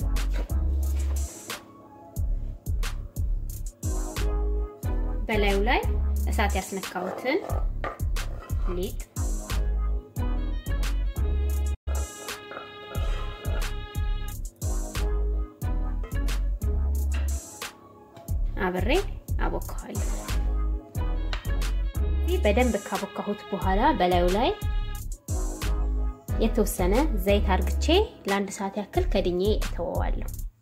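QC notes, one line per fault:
11.74 to 11.88 s, playback stall. The sound stops dead in mid-flow and the output goes silent for about 120 ms. It then carries on. The likely cause is the player running short of data, or its output thread being held up, so nothing was sent to the output until it recovered.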